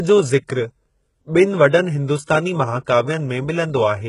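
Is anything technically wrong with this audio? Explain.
Yes. Throughout the speech, the audio likely passed through HE-AAC compression at a very low rate, one that fits roughly 12 kbps. At that rate the encoder keeps only the lower spectrum and synthesises the treble by copying lower bands upward under a coarse envelope, and nothing survives above about 11.1 kHz. The damage is heavy. The top end sounds bright but artificial, its harmonics misaligned, so s sounds come out gritty, metallic or lispy.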